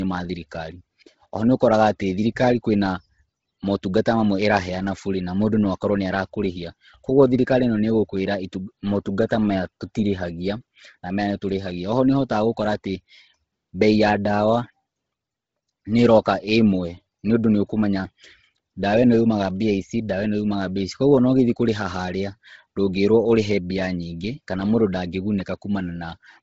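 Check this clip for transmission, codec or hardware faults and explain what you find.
One codec fault runs the whole way through. Likely Bluetooth LC3 compression: everything above 7.8 kHz is gone, and heavy noise-filled upper bands give the speech a breathy, grainy edge, pointing to a low bitrate around 16 kbps.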